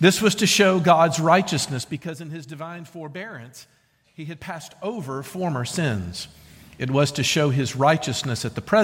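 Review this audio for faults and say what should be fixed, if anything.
Nothing here needs fixing.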